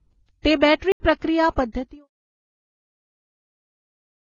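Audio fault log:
throughout: transcoding between lossy codecs. The speech carries two layers of coding damage at once: smeared, swirly low-bitrate texture together with a second layer of artefacts from another codec. Nothing reaches above 7 kHz, so sibilants sound dull and capped. The likely cause is an early very-low-bitrate pass, something like Vorbis near 12 kbit/s, later re-encoded to AAC-LC near 24 kbit/s. The second encoder spent its bits reproducing the first one's artefacts and added its own. On a spectrogram there is a hard ceiling at 7 kHz, with patchy, blocky holes in the upper bands below it.
0.92–1.00 s: block of digital silence. The speech drops out for 80 ms and returns abruptly, with no fade on either side. The level drops straight to silence and back, producing a brief hole in the sound. This points to a chunk of output samples that was never filled in time, or was filled with zeros. 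The waveform shows a flat line with vertical cliffs at both boundaries. The spectrogram shows an empty vertical gap. The fade-out ending near 2.09 s is a separate, gradual taper and shows no such edges.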